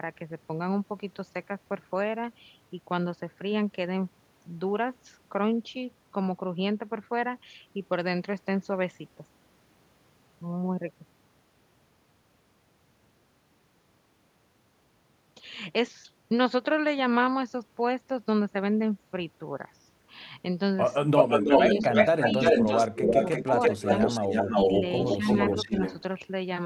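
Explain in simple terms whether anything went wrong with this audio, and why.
From about 21.1 s the speech gets ducked at 21.07, 21.73, 22.91 and 25.18 s, which is speech suppressed in double talk, likely from both sides talking at once.

There's also an echo leak from 21.16 to 26.02 s: a copy of the speech trails about a third of a second behind, nearly as loud, likely a loudspeaker echo getting through.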